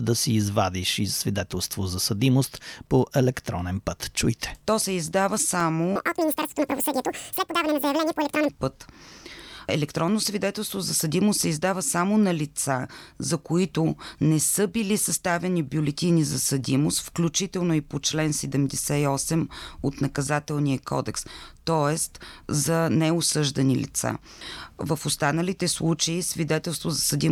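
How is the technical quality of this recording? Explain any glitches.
The recording has two faults.

From 4.82 to 5.60 s there are CD scratch ticks: four tiny clicks, the longest about two milliseconds. Each one marks damaged data the player patched over.

From 5.96 to 8.49 s there is a section at the wrong speed. It plays at 1.97 times normal, about ten semitones higher and hurried, likely from a clock mismatch.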